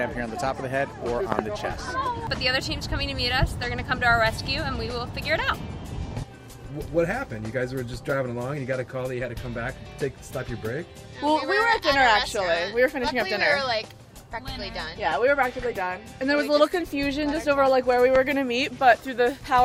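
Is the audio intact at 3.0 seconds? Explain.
Yes, the audio at 3.0 seconds is intact, with no dropout, click, distortion or other audible fault at that point.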